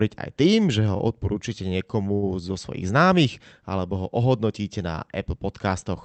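Speech with two short stalls from a late packet, at 0.97–1.02 s and 2.14–2.25 s. Each time the jitter buffer ran dry and the receiver held the last sound, for about 20 ms and then 79 ms, before resuming. Nothing is lost, but the second hold is the longer one.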